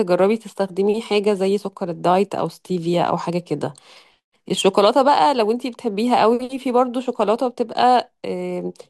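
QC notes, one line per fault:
No technical faults are audible at any point, and the signal stays continuous and stable across the whole recording.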